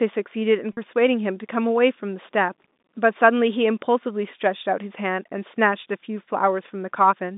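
At 0.73 s, a 40 ms stretch of speech, consistent with about four 10 ms packets, goes missing, and the receiver conceals it by repeating the last pitch period. This is packet loss with pitch repetition, heard as a briefly held, buzzy tone over the narrowband G.711 telephone line.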